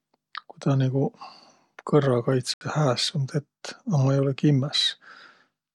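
At 2.54 s the speech cuts to complete silence for 74 ms and resumes at 2.61 s, a gap with the hallmarks of a Bluetooth stall: the likely cause is radio interference delaying packets until the headphones' buffer emptied, so playback simply halted while they were resent. What sets it apart from packet-loss concealment is the dead silence rather than a smeared or repeated fragment, and the sound then picks up again.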